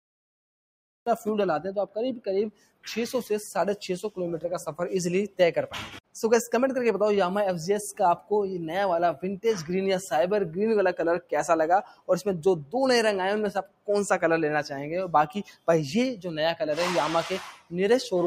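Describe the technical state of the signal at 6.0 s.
A speech-tuned noise suppressor stays active across the whole clip, treating sustained tones and ambience as noise and pulling them down by roughly 10 dB, so the level pumps and tails thin. From 5.88 to 6.16 s it mistakes this sound for noise and cuts it, with the deepest drop about 18 dB, leaving a brief dip of around a fifth of a second.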